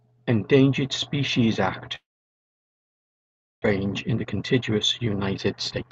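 From 1.95 to 3.66 s a likely long network dropout occurs: packets stopped arriving, so the receiver extended the last sound into a brief fading buzz before settling into near silence. Roughly 0.9 s of speech never arrives, and the audio resumes afterward, delayed by about 0.7 s. From 3.84 to 5.91 s a jitter buffer speed-up drains that excess delay by repeatedly cutting pitch-period-sized pieces, about 0.3 s in total. The speech plays at 115% speed with unchanged pitch and sounds hurried. Throughout, the Opus call codec limits the audio to an 8 kHz band.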